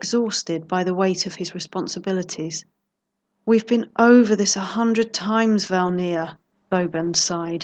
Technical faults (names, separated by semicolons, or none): call bitrate drop